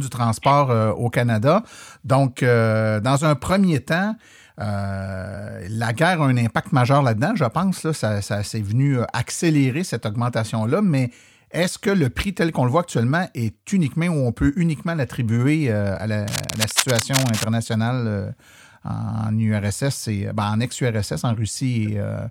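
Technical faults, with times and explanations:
16.28–17.47 s, cable scratch noise: for just over a second, dense, uneven crackling and rustling sit over the speech, only slightly quieter than it. The likely cause is a worn cable or connector being moved, its contact resistance jumping rapidly and injecting bursts of noise.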